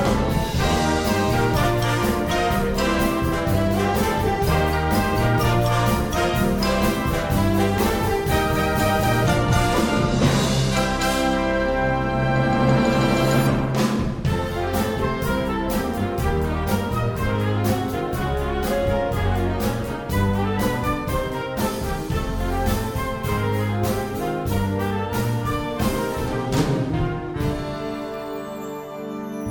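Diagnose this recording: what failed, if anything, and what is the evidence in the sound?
Nothing stood out on listening that would point to a failure at any stage of the chain.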